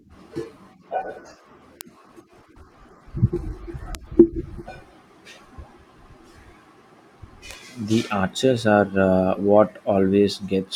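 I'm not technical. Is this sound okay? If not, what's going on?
No. There are three sharp, isolated ticks in the speech, at 1.81, 3.95 and 7.51 seconds, each gone in an instant. These are bit error spikes: one or a few digital values in a row got corrupted for a split moment, producing a click unrelated to the voice.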